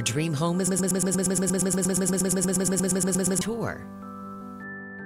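From 0.67 to 3.41 s a broken-record loop plays: a 118 ms fragment repeats exactly, 23 times back to back, as a rapid stutter, likely from a stalled player or stream. The waveform and spectrogram show identical blocks tiling that span.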